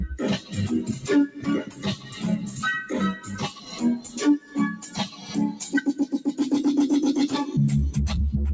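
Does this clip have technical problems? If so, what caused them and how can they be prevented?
Yes. A noise suppressor applied to music or sounds is active across the whole clip. A suppressor tuned for speech is treating steady, sustained parts of the sound as background noise and pulling them down, with the level swinging by around 10 dB as it reacts. Sharp onsets pass mostly intact, but held parts and decays sink, so the sound pumps and thins. To prevent this, disable noise suppression or use a music mode when the source is not speech.

Sound cut by the noise suppressor is clearest at 1.28–1.47 s, 1.64–2.24 s, 3.52–3.81 s, 4.02–4.18 s, 4.39–4.57 s, 4.76–5.32 s and 5.53–6.33 s. In these spans the suppressor judged the sound to be noise and ducked it by about 9 to 12 dB, lasting from a brief dip to roughly half a second. Sustained and fading portions sink in level or have their tails clipped short while transients survive. 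Turning the suppressor off for non-speech material prevents these dips.

The absence of content above 8 kHz fits the wideband G.722 call path at 64 kbps and is expected rather than a fault.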